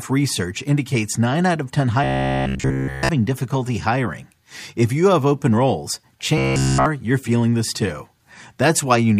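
Robotic sound from repeated short buffers, likely caused by audio arriving too seldom so a 15 ms slice gets looped, turns speech into a rigid metallic buzz at 66.7 Hz from 2.04 to 3.10 s, before "difficulty hiring", and from 6.38 to 6.86 s, between "you have open roles" and "you're feeling this too".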